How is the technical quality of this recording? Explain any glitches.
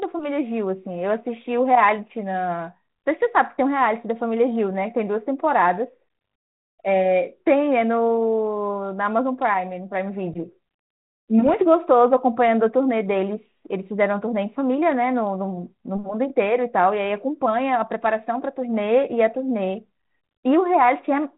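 The speech has a telephone-band character consistent with G.726 ADPCM at 32 kbit/s: nothing above 4 kHz and a light coding texture. Two short glitches stand out.

At 9.54 s and again from 11.46 to 11.54 s there are bit errors on an ADPCM link. Flipped bits corrupt the decoder's step size and prediction, so each error rings on briefly as a pop with a rough, level-jumping burst. The error rate is around 0.1 to 0.15 percent. On a waveform these show as spiky excursions. On a spectrogram they appear as thin vertical broadband streaks capped at 4 kHz, with the longer one at 11.5 s.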